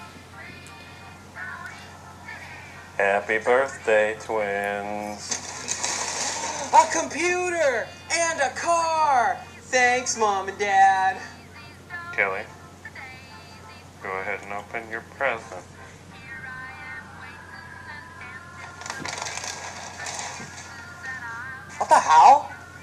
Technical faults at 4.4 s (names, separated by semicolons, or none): none